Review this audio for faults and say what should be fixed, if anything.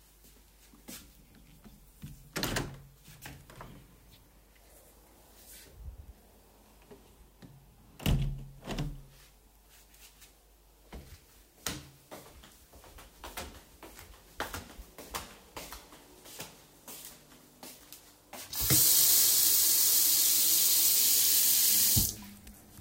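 There are two short skips, at 10.22 s and 22.17 s. In each, a sliver of sound of roughly 10 ms vanishes, and the material on either side butts together with no gap. This is likely audio missing between chunks. The recorder or processor appears to work in 3 s blocks and drops a few milliseconds while closing one block and opening the next. Both jumps sit on those boundaries. To prevent it, hand off blocks with overlapping or double buffering so no samples are lost between them.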